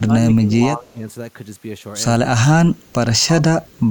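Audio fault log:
0.00–0.53 s, 0.75–1.04 s, 2.36–2.44 s, 2.74–2.93 s and 3.21–3.29 s, speech suppressed in double talk: the echo canceller likely could not tell this talker apart from loudspeaker echo while both sides spoke, so it turned the microphone signal down. The speech dips sharply in each stretch, by about 15 to 25 dB at its deepest, with the longest cuts at the start and the shortest near 2.4 s and 3.2 s.
3.66–3.80 s, echo leak: one side's echo canceller likely left some of its loudspeaker pickup in the signal it sent back. A faint delayed copy of the speech comes through about 217 ms behind the original, roughly 40 dB below it, as a brief scrap just before the clip ends rather than a sustained echo.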